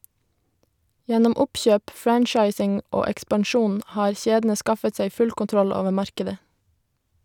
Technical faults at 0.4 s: none

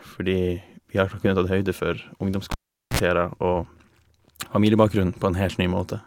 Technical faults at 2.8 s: cable pulled and plugged in

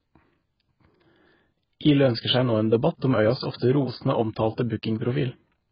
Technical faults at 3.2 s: AAC compression

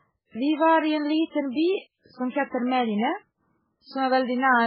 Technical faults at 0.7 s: MP3 compression

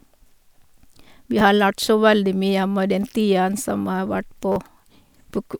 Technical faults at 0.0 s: none

